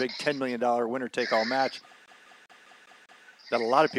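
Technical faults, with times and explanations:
2.06 to 3.26 s, CD stuck on one turn: a surface scratch keeps knocking the laser back one track at the same point of each revolution. The player reads the same stretch of disc over and over instead of moving on. The result is a fast, perfectly even stutter, with about 0.2 s of sound repeating six times. A brief mute lands at each jump, where the read restarts, before the audio continues past the loop.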